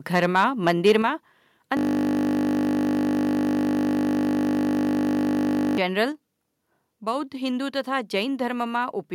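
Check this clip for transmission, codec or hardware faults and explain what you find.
Three kinds of fault are audible in this speech: a stretch of microphone overload, two sudden steps down in microphone volume, and a long system hang loop.

From 0.15 to 0.92 s the loudest syllables take on a harsh, crackly edge, the sound of microphone overload. The likely cause is an input level set too high. Peaks run about 4 dB past the converter's ceiling, so their tops are sliced flat. Only a small fraction of the waveform is affected, but the flattened peaks add brittle distortion right where the sound is strongest.

At 1.02 s the level drops abruptly, voice and background together, by about 5 dB. A second, smaller drop of about 3 dB follows at 6.12 s. This is the microphone volume being stepped down, likely by the call software reacting to an input it judged too hot. The first step arrives just after the distorted opening. 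Each change happens in a single jump rather than a gradual fade.

From 1.77 to 5.78 s the speech is replaced by a steady, mechanical buzz. This is a system hang loop. The machine stalled while the audio hardware kept replaying the same 20 ms slice of its ring buffer. Because the slice is so short, the repetition merges into a 50 Hz drone lasting about four seconds instead of sounding like distinct stutters. That loop length fits a 20 ms buffer.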